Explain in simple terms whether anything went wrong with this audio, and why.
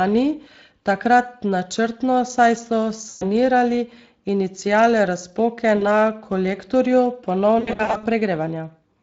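Yes. The whole recording passed through the Speex codec, a low-rate speech coder that discards detail, so the speech sounds plainly rough, hoarse and noisy throughout.

There is also VoIP packet loss concealed by the speech codec at 3.09–3.26 s, 5.77–5.84 s and 7.59–8.06 s. Chunks of audio went missing, and the decoder filled each gap by stretching the last sound into a fading buzz or noise. The last stretch is a cluster of short dropouts, the longest about 80 ms.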